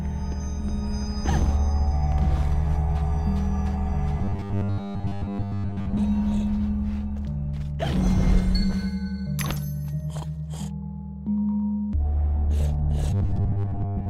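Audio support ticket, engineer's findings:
Rigid metallic buzz at a fixed 100 Hz, 4.19–6.00 s and 13.10 s to end. Robotic sound from repeated short buffers, likely an audio-delivery underrun: playback loops the last ~10 ms of audio, replacing most of the real signal.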